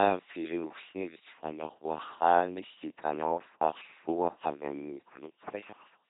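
Throughout the speech, an LPC-10 vocoder at 2.4 kbit/s heavily rebuilds each moment as pulse-driven buzz or noise-driven hiss, giving a mechanical robotic voice, with nothing above 3.8 kHz.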